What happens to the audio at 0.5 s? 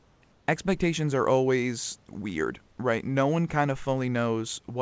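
Just before 0.5 s, from 0.32 to 0.48 s, the room's background gives way to a smooth, featureless hiss about 2 dB quieter, ending as "expectations are always weird" begins. This is likely comfort noise in place of the background: transmission paused during the silence, and the receiver filled the gap with synthetic noise.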